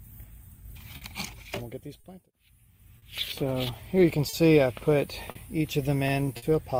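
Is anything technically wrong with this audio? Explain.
Yes, two related timing faults are present.

Clock drift between sender and receiver runs through the whole clip. The sending device's clock runs slow, roughly 4 percent behind the receiver's, so the jitter buffer keeps draining faster than it refills. The receiver must keep compensating with small repeats and pauses, so the audio carries recurring timing hiccups at uneven spacing.

A short stall from a late packet occurs six times: at 0.97, 2.0, 2.98, 4.29, 5.31 and 6.37 s. Each time a packet had not arrived when due, the buffer ran empty, and the receiver held the last sound for about 40 ms (about 50 ms at the final one) before resuming from the same point. Nothing is lost, but each spot has a sound held too long, with a slight buzz or dip, and the delay grows by that amount.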